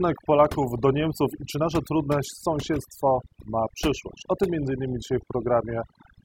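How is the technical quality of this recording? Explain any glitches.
The recording suffers from overdone noise removal, present for the whole length of the speech. Between phrases the background drops to near silence, broken by twinkling specks. A noise reducer was set too aggressively, cutting individual frequency bands hard whenever their level sat close to its noise estimate. The quieter components of the speech fell under that threshold and were removed along with the background noise, leaving the chirping leftovers.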